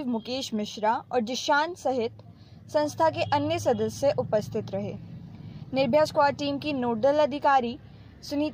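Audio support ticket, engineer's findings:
No audible faults found.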